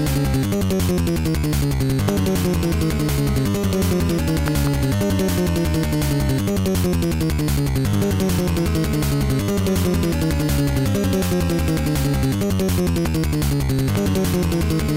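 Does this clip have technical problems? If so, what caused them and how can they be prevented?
Yes, there are loud pops at 2.09–2.11 s, 4.48–4.69 s (two in quick succession), 13.06–13.08 s and 13.95–13.98 s, roughly 10 dB above the sound, or about 15 dB for the one at 13.06 s. A sudden voltage jump, likely from a plug, switch, static discharge or driver glitch, got added on top while the audio kept going underneath. To prevent them, secure cables and connectors, avoid switching gear or touching plugs mid-recording, and keep drivers up to date.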